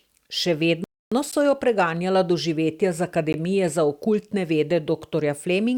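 At 0.84 s the speech just stops dead and sits in silence until 1.12 s, a hole of about 275 ms, before picking up again with "so jo preganjala doživetja". That's a playback stall. The delivery then resumes, so you hear an unnatural freeze in the middle of the flow. Most likely the player's buffer ran dry or its output thread got blocked for a moment.

Then there are two gaps between stream segments, short hard-edged dropouts where the audio cuts to silence and comes back with nothing missing. The first, at 1.31 s, lasts 12.5 ms and sits just before "so jo preganjala doživetja". The second, at 3.33 s, lasts 14.2 ms, between "jo preganjala doživetja z" and "za okultne vede". They're spaced about 2 s apart, which fits 2-second segments whose timestamps don't quite butt up against each other, so the player pads the difference with silence.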